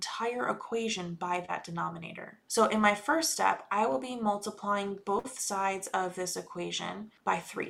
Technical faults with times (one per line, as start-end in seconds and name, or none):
1.45-1.59 short concealed packet loss
5.19-5.26 burst of packet loss